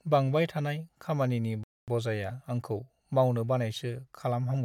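At 1.64 s the player likely ran dry of buffered data or had its output thread held up, causing a playback stall: the speech cuts to silence for about 240 ms, until 1.88 s, then resumes, leaving an audible gap in mid-flow.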